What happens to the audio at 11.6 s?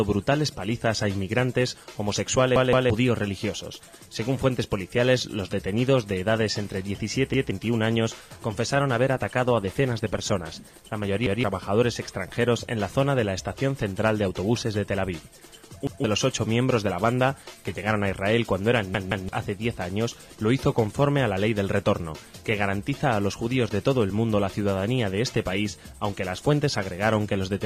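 At 11.6 s the audio sounds rough and muffled, with the top end gone. This is a call bitrate drop lasting from 8.62 to 14.15 s, bottoming out for about 2 s. The sound points to the encoder falling from roughly 128 to 21 kbps, coding coarsely and discarding high frequencies.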